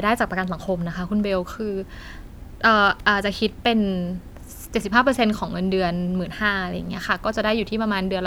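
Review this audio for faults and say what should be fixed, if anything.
No faults; nothing needs fixing.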